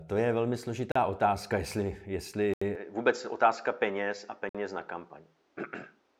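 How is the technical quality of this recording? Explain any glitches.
The recording has two kinds of glitch: three brief dropouts and a lasting change in tone partway through.

The dropouts at 0.92 to 0.96 s, 2.54 to 2.62 s and 4.49 to 4.55 s are likely a Bluetooth stall. Radio interference delayed packets, the headphones ran out of buffered audio and playback waited for the retransmissions. Each one is a clean hole of silence, about 37, 79 and 54 ms long, after which the speech carries on.

From 2.75 s to the end, the input likely switched to a poorer device. The system changed its input mid-recording, to another microphone or a headset's call mode. Nothing above 7.5 kHz comes through after that point, so the speech sounds duller and more boxed-in. A new background noise sits roughly 40 dB below the voice. Loudness stays about the same, and the change happens with no gap.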